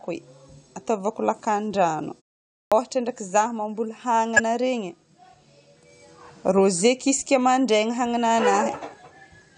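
At 2.68 to 2.72 s, a clipped start after a pause. The output device slept through about 0.55 s of silence. About 36 ms was swallowed, so "ndraiky zaho mamboly" starts abruptly.

At 4.36 to 4.40 s, after "ndraiky zaho mamboly", a corrupt frame was decoded. Damaged bits in about one frame put energy at wrong frequencies. It sounds like a brief chirp or noise burst.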